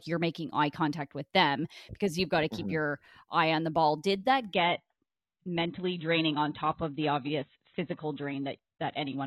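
From 4.54 s, right after "the ball did that", the speech switches to an adaptive stream at a lower bitrate: nothing survives above 4.1 kHz and codec artefacts thicken, consistent with a drop to about 16 kbit/s. Unlike a dropout, the change is abrupt but leaves no gap.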